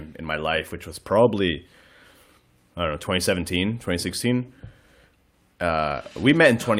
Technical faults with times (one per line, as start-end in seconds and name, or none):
none